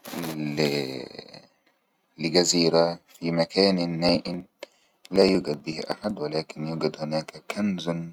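From 4.09 to 6.10 s, between "لجزيرة في مكان" and "ولكن يوجد", periodic USB or driver dropouts skip about a millisecond every 63 ms, producing regular ticks through the speech.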